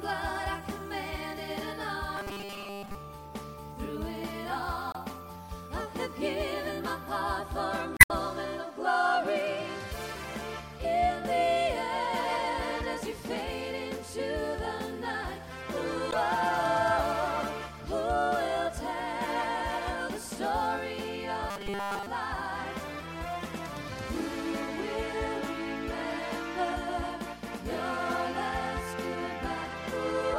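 Robotic sound from repeated short buffers appears from 2.17 to 2.95 s and again from 21.50 to 22.07 s. In both stretches the audio collapses into a hard, metallic buzz at 200 Hz, which matches a 5 ms chunk being looped over and over. The likely cause is new audio arriving too slowly, so the playback side keeps replaying its last short buffer while most of the real signal, around seven parts in ten, is skipped.

Damaged data in a compressed stream shows up as three brief glitches: at 4.91 to 4.96 s, at 7.97 to 8.11 s, and at 16.09 to 16.14 s. At each point the decoder hit frames it could not read correctly, lost its place in the stream and had to search for the next valid frame header. The result is a short disturbance in the audio.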